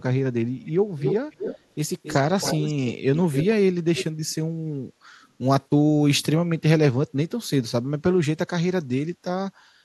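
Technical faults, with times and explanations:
0.65–0.72 s, 0.97–1.15 s, 1.31–1.59 s, 2.03–2.16 s, 2.40–2.93 s, 3.15–3.55 s and 4.29–4.35 s: echo leak. A delayed copy of the speech trails it by 274 ms. The echo's loudness varies a lot. The first and last scraps are very faint. The pieces around 1 s are only a little quieter than the speech, and the others fall in between. The likely cause is a far-end loudspeaker whose echo canceller let part of the returning signal through.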